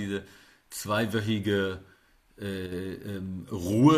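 At 2.66 s the level drops abruptly by about 6 dB and holds there until 2.72 s, a gap of roughly 56 ms, before snapping back. This is most likely one channel dropping out: one side of a stereo feed briefly went silent, so when the two channels were summed to mono, the shared speech content fell to half amplitude. It is heard as a short, sharp dip in loudness rather than a full cut.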